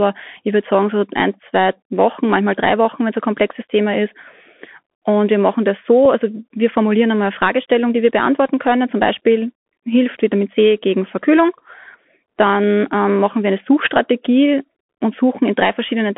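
The whole recording carries the narrowband sound of the Bluetooth CVSD headset codec, with nothing heard outside roughly 200 Hz to 3.4 kHz. The one-bit delta coding, which fits a 64 kbit/s link, leaves a granular hiss, scratchy sibilants and distortion where loud high-frequency energy outruns the adapting step size.

At 6.05 s a Bluetooth headset packet is repeated, which fits a single lost packet. About 3.8 ms of audio was missing, and the chip decoded the previous packet's bits again in its place. With no run of repeats to build a buzz, this is heard only as a brief small tick.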